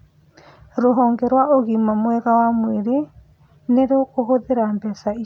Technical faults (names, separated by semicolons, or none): none